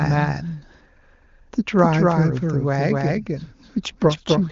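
A speech clip in which every phrase is followed by a full-band copy about a third of a second later and about as loud, with no decay or room colour: a doubled audio track, likely from a second, slower capture path mixed back in. From 3.83 to 4.50 s, the wideband voice turns rougher and more synthetic without losing band or dropping out, an AMR rate drop consistent with the link forcing AMR-WB down from about 23.85 to 8.85 kbit/s.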